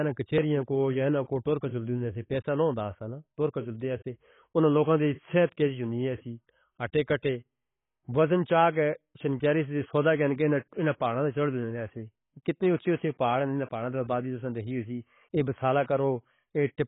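Right from the start and all the way through, the speech sounds dull and swirly, with nothing above about 3.8 kHz and a fizzy, warbling edge on sibilants. That's likely heavy AAC compression, and the cramped band and smearing point to a very low bitrate, something like 16 kbps.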